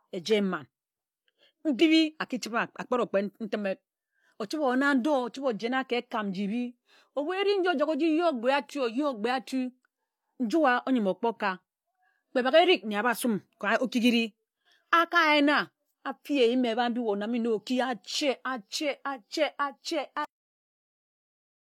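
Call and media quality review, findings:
Cut-off end at 20.25 s: speech stops mid-sound, no decay, silence through to the end of the clip. Probable component: capture/recording buffer flush at stop. Mechanism: final buffers never written, so the last stretch of audio is lost abruptly.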